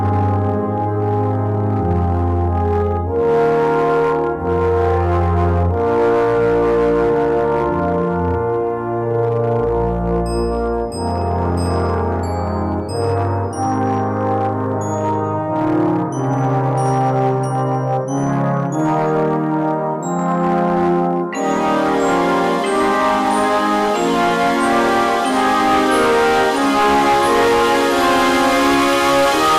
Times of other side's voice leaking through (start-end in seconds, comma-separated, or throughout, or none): none